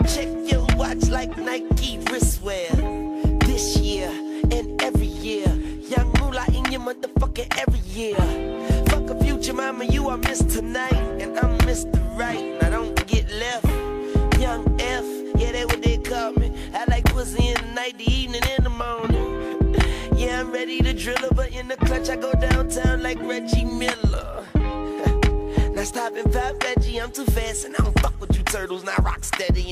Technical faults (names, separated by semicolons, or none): none